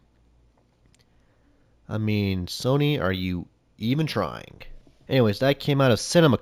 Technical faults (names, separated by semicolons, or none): imaging from linear upsampling